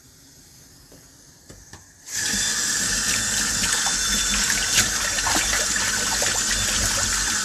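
Nothing stood out on listening to this recording of everyday sounds.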